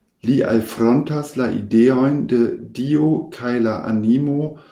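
There are no technical faults in this speech clip to describe in time order.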